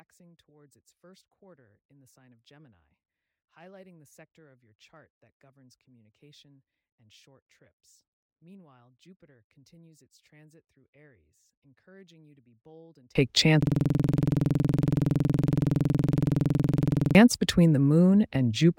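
One channel inverted, from 0.0 to 13.15 s: the speech drops by about 35 dB and turns faint, as centred content cancels in a mono sum. The likely cause is reversed polarity on one stereo channel, leaving only the small inter-channel difference audible.

System hang loop, from 13.63 to 17.15 s: a single 46 ms slice of audio repeats exactly about 76 times, producing a 21.5 Hz stutter. The computer stalled while the hardware kept replaying its ring buffer, which fits a 2048-sample buffer.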